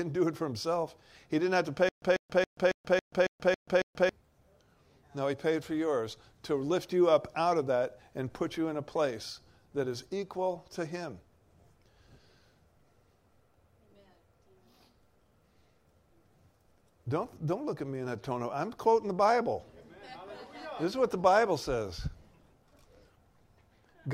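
From 1.89 to 4.09 s, a 142 ms burst repeats eight times with 134 ms silences between: stutter with silent gaps, likely a stalled stream replaying its last fragment.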